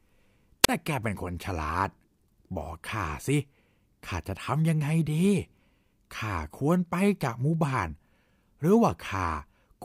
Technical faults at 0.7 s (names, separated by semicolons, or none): wireless microphone squelch dropout